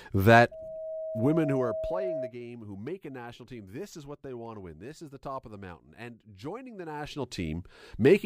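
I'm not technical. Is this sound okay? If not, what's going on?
No. From 0.51 to 2.34 s there is loudspeaker feedback squeal. A microphone is picking up its own loudspeaker, and the sound loops round and grows. A 640 Hz tone swells over about a second and a half until it rings well above the speech.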